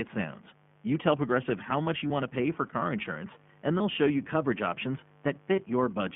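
A mains buzz at 50 Hz runs under the whole clip, roughly 30 dB below the speech. Switching spikes twice per cycle make it raspy rather than a smooth hum. The whole clip also carries plainly audible iLBC codec damage: 15.2 kbps with 20 ms frames, passing only about 150 Hz to 3.4 kHz. It sounds rough and synthetic, not just band-limited. Lost iLBC frames occur at 2.08 to 2.12 s between "how much you" and "want to pay for", at 3.78 to 3.81 s between "for car insurance and" and "show you coverage options", and at 5.56 to 5.59 s just after "show you coverage options". Each is one 20 ms frame, heard as a brief held buzzy vowel rather than silence, with the voice recovering immediately.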